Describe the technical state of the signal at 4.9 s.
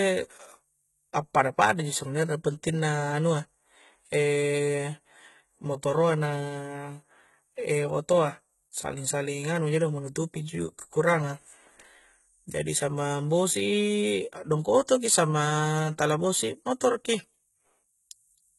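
At 4.9 s the speech carries the same coding damage heard across the whole clip, most likely from HE-AAC compression. The treble sounds synthetic: sibilants come out gritty and metallic, because the upper band is not the original signal but lower-band content copied upward and shaped by a coarse envelope, so its harmonics fail to align with those below the crossover. Nothing is present above 11.8 kHz, and the heavy degradation points to a very low bitrate in the region of 16 kbps.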